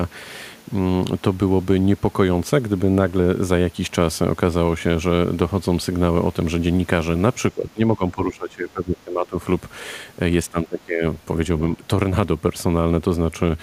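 Speech, with the talker's level dropping sharply at 7.52 to 9.39 s (roughly 15 dB), 10.49 to 11.04 s (about 20 dB) and briefly at 11.8 s, most likely speech suppressed in double talk, where an echo canceller turned down the near talker while the far end spoke.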